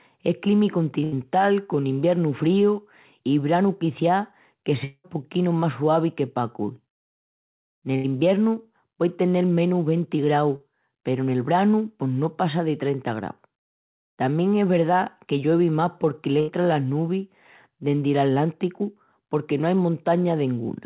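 Speech passing through a narrowband call path, with nothing above 4 kHz, which fits G.711 mu-law at 64 kbps. At 1.04 to 1.15 s (just before "con iviernu"), 7.96 to 8.07 s and 16.40 to 16.51 s (just before "las nubis dendi"), the sound stalls into a held buzz or fading hiss for about 80 ms before picking up further along. That is a burst of packet loss: consecutive packets went missing and the receiver extended the last sound while fading it, so roughly 80 ms of audio is simply gone. Between "i branu quiciás que" and "poquinu más suavi que", from 4.84 to 5.07 s, a longer decaying buzz or hiss runs for about 0.2 s and ends in a brief silence. This is likely a long network dropout, where the receiver filled the hole until it gave up and about 200 ms was never played. At 10.56 to 10.63 s a brief smear of about 40 ms appears where the decoder patched a short concealed packet loss by continuing the preceding sound and blending back into the real audio.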